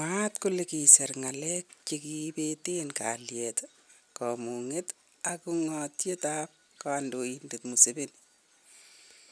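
Speech recording with no audible technical faults.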